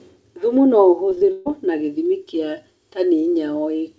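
Around 1.10 to 1.20 s there's short concealed packet loss twice, overlapping at 1.15 to 1.18 s. Each time about 20 ms went missing and the receiver patched it by extending the last sound for 11 and 14 ms, so you get a quick smear or wobble.

Right after, from 1.32 to 1.47 s, comes a burst of packet loss. About 140 ms never arrived, and concealment stretched the previous sound across the whole gap, holding it as a buzz or hiss that fades without ever going silent. The audio then jumps ahead into "gĩthimi kia", with that stretch simply gone. Throughout, the band-limited wideband call sound tops out at 8 kHz.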